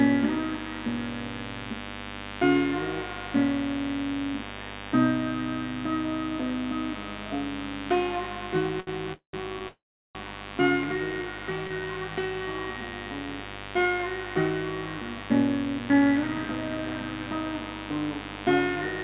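A recording of everyday sounds sits under a steady, raspy buzz that runs the whole 19 seconds and is loud, roughly 10 dB below the sound itself. This is mains buzz: sharp switching spikes from a dimmer, rectifier or unshielded lead get in twice per 50 Hz cycle, and their harmonics climb into the kilohertz range, which gives the edgy rasp rather than a soft hum. The audio is also band-limited, with nothing above 4 kHz, which fits a narrowband call codec. At 8.8 s a sound hangs for about 70 ms longer than it should, and at 11.7 s there is a briefer hold of about 32 ms, each before the sound picks up where it left off. These are short stalls from a late packet: the jitter buffer ran dry for a moment, so the receiver stretched the last fragment until the packet turned up, and nothing was lost. Longer breaks follow at 9.13 to 9.35 s and 9.68 to 10.17 s, where the last sound fades and then drops to silence, about 120 ms and 370 ms respectively, before resuming exactly where it stopped. 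These are call audio freezes, likely caused by packets held up in transit so that the jitter buffer emptied and the receiver could only extend the last sound, inserting gaps of about 200 ms and 465 ms. Between 10.95 and 11.87 s, and again from 12.73 to 13.27 s, the sound drags slightly at unchanged pitch, running at about 96% and then 91% speed, with drawn-out textures. This is jitter buffer slow-down: to rebuild its reserve, the receiver repeated tiny periods or quiet stretches over and over, adding about 49 ms and 62 ms.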